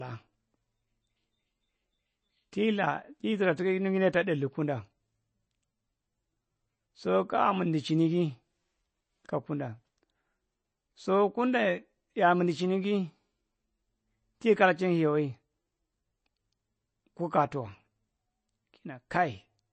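Throughout, likely MP3 compression starved of bits: the treble stops at 8.3 kHz and plainly audible codec damage mars the speech, fitting roughly 32 kbps.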